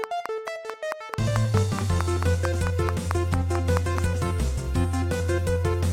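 A train of clicks runs from 0.04 s to 3.99 s: about twenty near-identical pops at a regular 4.56 per second, each standing roughly 15 dB above the surrounding sound. The likely cause is interference from nearby equipment or a faulty connection or power supply injecting repeated pulses.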